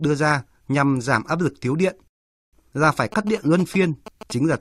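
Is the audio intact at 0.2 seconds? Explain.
Yes, the audio at 0.2 seconds is intact, with no fault present at that moment.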